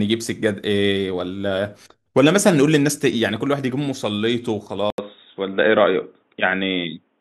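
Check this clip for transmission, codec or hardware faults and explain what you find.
One fault is audible, in the last stretch of the speech. At 4.90 s the audio drops out for 80 ms, then returns dull and boxy until the end, with nothing above 3.8 kHz and a faint new background noise at roughly the same level. The likely cause is an input switched to a poorer device, whose narrower band cuts the top. A spectrogram shows a sharp ceiling at 3.8 kHz after a brief blank column. The waveform shows a short flat gap.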